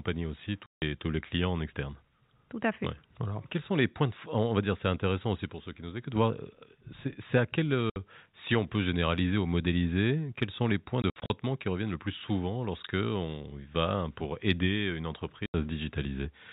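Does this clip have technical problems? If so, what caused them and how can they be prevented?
Yes. The speech drops abruptly to dead silence at 0.66 to 0.82 s, 7.9 to 7.96 s, 15.46 to 15.54 s, and in several short gaps scattered between 11.02 and 11.3 s. This is packet loss filled with silence: lost packets were replaced by zeros, and gap lengths in 20 ms steps fit 20 ms packets. The narrowband telephone tone of the G.711 coding comes through intact around these gaps. Enabling packet loss concealment in the receiver, with a jitter buffer or forward error correction on the link, would prevent the holes.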